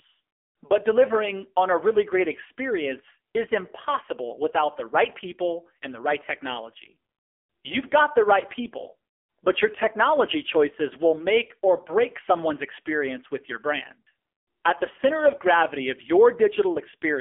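Speech, carrying an AMR narrowband mobile codec throughout. The band sits at 300 Hz to 3.4 kHz, and nothing passes above 3.5 kHz. Heavy codec damage leaves the voice buzzy and synthetic, which points to a low AMR-NB mode near 6.7 kbps.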